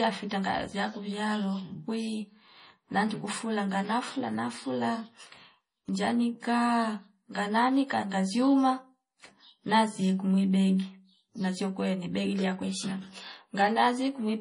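This is a speech clip with two faults running throughout. The sound is watery and swirly, with smeared attacks, the heavy damage of likely MP3 compression at a low bitrate, which fits 32 kbps. A steady buzz at 43.1 Hz is a block size mismatch (truncated), fitting 1024-sample blocks whose ends are dropped, and the speech runs at about its normal speed.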